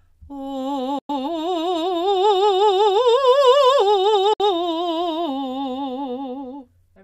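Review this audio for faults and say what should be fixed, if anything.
The music falls silent at 0.99–1.10 s and 4.33–4.40 s, resuming further along rather than where it stopped, unlike a buffering stall. This is likely a Bluetooth dropout. Keep the headphones close to the source and away from wireless interference.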